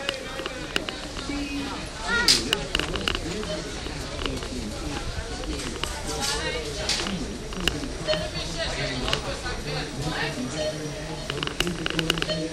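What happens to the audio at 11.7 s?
Nothing goes wrong at 11.7 s; the audio there plays through intact, with no dropout, click, distortion or other fault.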